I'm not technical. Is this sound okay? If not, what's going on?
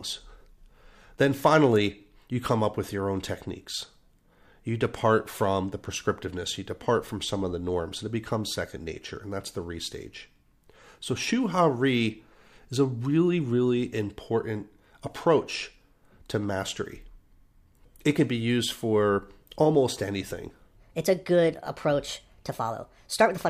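No. Right after "used for almost anything", at 20.77 s, the last part of the speech plays too fast until the end at 23.50 s. This is a section at the wrong speed. It runs about 1.34 times faster than normal. Speed and pitch rise together, so the voice jumps up by around five semitones and sounds hurried and squeaky. The likely cause is that this stretch was played or edited against the wrong clock.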